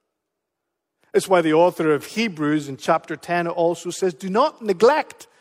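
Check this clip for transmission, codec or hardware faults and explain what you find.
Nothing in this speech recording points to a fault. There is no moment in it that needs flagging.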